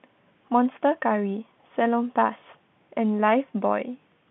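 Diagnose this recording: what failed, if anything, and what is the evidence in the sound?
Nothing failed in this recording, and the sound gives no evidence of a fault, only the expected narrow telephone band of G.711 coding with no content above about 3.8 kHz.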